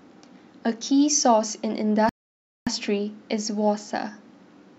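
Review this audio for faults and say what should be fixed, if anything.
A rebuffering stall occurs from 2.09 s to 2.67 s: the player drained its store of downloaded audio and had to halt playback until more data arrived. The speech drops to silence for about 0.57 s, then picks up at exactly the point where it stopped, so nothing is skipped but the clip runs that much longer. To prevent it, keep a deeper playback buffer or lower the stream bitrate so delivery stays ahead of playback.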